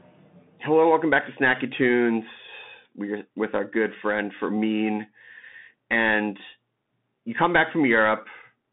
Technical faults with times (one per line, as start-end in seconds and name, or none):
0.00-8.72 Bluetooth CVSD headset codec